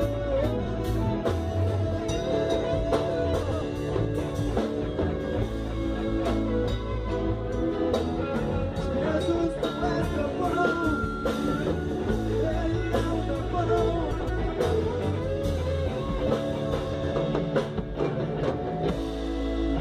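Frames out of order occur at 0.61 to 0.67 s, 3.42 to 3.62 s, 14.10 to 14.30 s and 16.94 to 17.13 s. Each time, two adjacent blocks of decoded audio play in swapped sequence, so the later part sounds before the earlier one. The first swap exchanges blocks of about 23 ms, which fits single codec frames. The other three exchange blocks of about 93 ms, which points to runs of four frames. Each is heard as a brief garbled flutter, and no time is lost.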